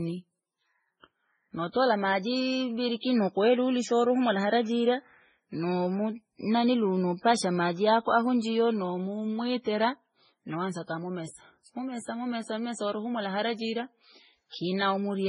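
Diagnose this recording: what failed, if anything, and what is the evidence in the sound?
The failure sits at the codec stage and runs through the whole speech recording. The audio is dead above 10.5 kHz, and two different sets of coding artefacts are audible together. The combination is likely transcoding between lossy codecs: a very low-rate MP3 pass, around 16 kbit/s, re-encoded to Vorbis at roughly 25 kbit/s. The second encoder wastes bits reproducing the first one's artefacts and adds its own. The lowest bandwidth limit in the chain survives.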